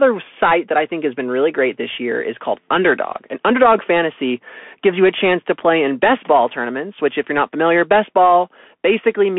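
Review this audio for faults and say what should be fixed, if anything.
Throughout, the speech sounds thin and boxed-in, with grainy hiss and scratchy s sounds. This is the Bluetooth CVSD headset codec: band limited to 200 Hz–3.4 kHz, its one-bit adaptive step lagging fast changes, consistent with a 64 kbps link. To prevent it, record through a wired microphone or a wideband Bluetooth mode instead of the narrowband headset profile.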